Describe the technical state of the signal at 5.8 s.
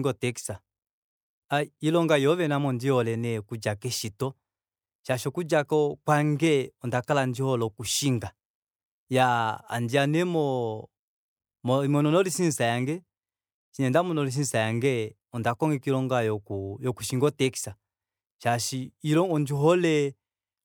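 At 5.8 s the speech signal is intact, with no technical fault audible at that moment.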